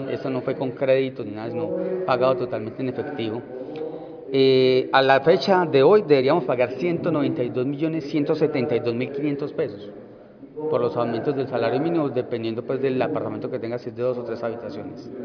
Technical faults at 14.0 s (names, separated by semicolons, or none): none